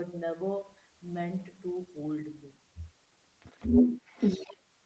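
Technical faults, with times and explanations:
3.40–4.59 s, other side's voice leaking through: a second voice comes up alongside the main talker and sits well above it, roughly 10 dB louder, for just over a second. This is likely far-end audio playing from the talker's loudspeaker and reaching the microphone, where the echo canceller failed to strip it out. The leaked voice shares the call's band limit, with nothing above 8 kHz.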